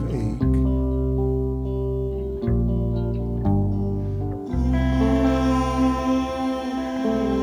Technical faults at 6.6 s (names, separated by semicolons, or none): sample clock jitter